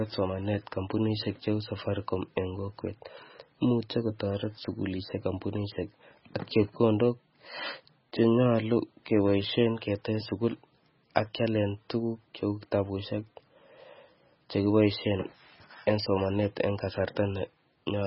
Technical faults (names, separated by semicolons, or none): MP3 compression